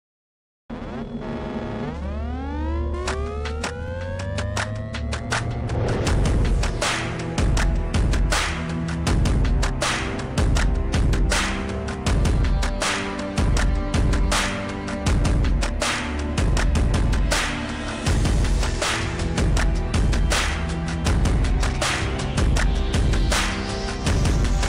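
At 3.88 s and again at 10.16 s, the sound jumps. No gap opens. A few milliseconds of audio vanish each time. The likely cause is a dropped buffer (overrun): samples were overwritten before being read, so the edges were joined directly.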